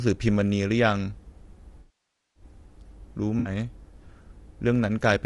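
Low-delay AAC compression runs through the whole speech clip, with plainly audible codec damage. The voice sounds rough and grainy, with noise filling the gaps between harmonics and a thin, synthetic-sounding top band. Those are the marks of a low-delay coder such as AAC-ELD, the likely cause, whose very short frames resolve pitch harmonics poorly. The degree of damage points to a bitrate around 32 kbps.

AAC frame loss with concealment strikes first from 1.79 to 2.43 s. This is a long gap of about 560 ms. The decoder keeps repeating and reshaping the last good spectrum, so the sound smears, then decays toward silence before fading back in. A second, short loss of about 60 ms at 3.39 to 3.49 s is concealed quickly and leaves only a brief noisy, phasey patch.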